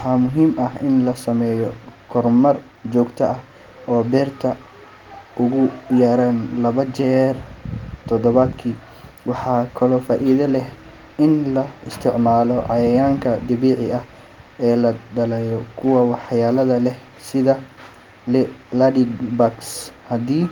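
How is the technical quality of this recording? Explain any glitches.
No glitches can be heard anywhere in this recording.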